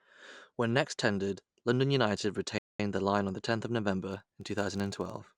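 At 2.58 s the player ran out of downloaded audio and halted until more data arrived, a rebuffering stall. The speech drops to silence until 2.80 s, then picks up exactly where it stopped, so nothing is missing but about 0.21 s of dead air is added.

From 4.12 s to the end, a filter restarted on every block, discarding its memory and starting each block from silence. Each restart leaves a small transient, heard as a 46.9 Hz buzz that follows the loudness of the speech, which fits a 1024-sample block.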